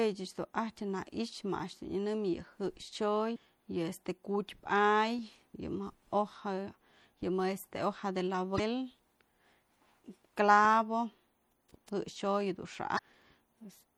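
Throughout, the speech sounds watery and swirly with dulled treble, likely MP3 compression at a rate that fits about 64 kbps. A spectrogram shows a flat high-frequency ceiling and flickering gaps. Damaged data in a compressed stream causes brief glitches at 3.33–3.37 s, 5.51–5.55 s, 8.56–8.60 s and 12.95–12.99 s, each about 40 ms long, where the decoder loses frame sync. Each one shows as a waveform discontinuity.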